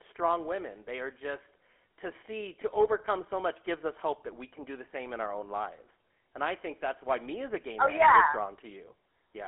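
Speech heard through the GSM full-rate codec for its whole length. The audio sits in a telephone band of roughly 250 Hz to 3.4 kHz, with nothing at all above 3.8 kHz, so it sounds thin and dull. The coder rebuilds the voice from a vocal-tract model excited by a coarse, regularly spaced pulse train, which leaves a plainly audible buzzy, gravelly roughness on every phrase. The character fits the 13 kbps full-rate GSM coder.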